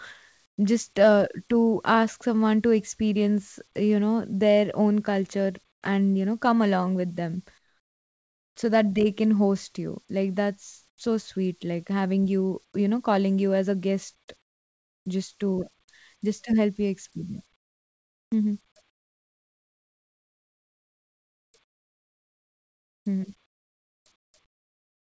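Speech over a call path whose G.722 coding leaves nothing above 8 kHz, with the background in the pauses swapped for comfort noise at 0.46–0.58, 5.72–5.82, 7.58–8.56, 10.90–10.98, 14.42–15.06, 17.56–18.32, 18.90–23.06 and 23.46–25.12 s. The real background drops out, about 13 to 22 dB quieter, likely from discontinuous transmission, leaving flat, textureless bands on the spectrogram and sudden low plateaus in the waveform.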